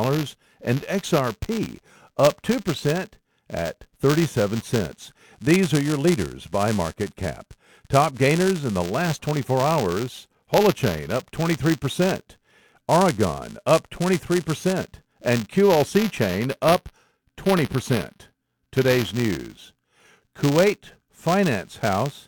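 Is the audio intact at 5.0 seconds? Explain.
No, at 5.0 seconds the speech carries buffer tearing, which runs through the whole clip. The writer and the hardware reader of a ring buffer have drifted, crossing every period, so a small sliver of each buffer holds audio from about 15 ms earlier, joined by hard edges. This gives a robotic 200 Hz buzz, fitting a 5 ms period, heard only while sound is present. A waveform shows tiny steps every 5 ms, and a spectrogram shows vertical striations with a 200 Hz harmonic comb.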